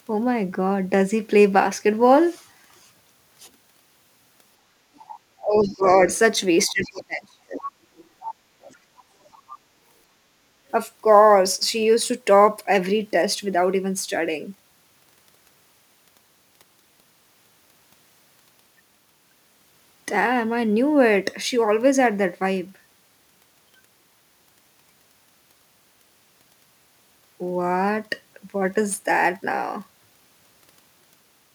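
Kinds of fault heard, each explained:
Sample clock jitter, throughout: The converter's sampling clock wanders by a few microseconds, so each sample lands slightly early or late. Because the timing error matters most where the waveform changes fastest, the resulting noise follows the speech, sitting roughly 35 dB below it. It is heard as a fine hiss or grit on loud and bright syllables that disappears in the pauses. That dependence on signal is what sets it apart from a steady noise floor.
Other side's voice leaking through, 4.95–5.17 s, 5.63–6.18 s, 6.82–7.01 s, 7.97–8.03 s, 8.20–8.34 s and 8.62–8.76 s: Brief fragments of a second voice surface behind the talker, roughly 15 to 30 dB down. The loudest is near 8.2 s. This is likely far-end audio from the talker's loudspeaker getting back into the microphone, with the echo canceller not removing all of it. The short scraps are the residue the canceller missed.
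Speech suppressed in double talk, 5.41–5.87 s and 6.69–7.72 s: The talker's level sinks, by roughly 20 dB in the first stretch and as much as 35 dB in the second, which lasts about a second. These dips overlap the leaked far-end fragments, so both sides were likely speaking at once. The echo canceller could not tell the near voice from the echo and turned everything down, gouging holes in the talker's speech.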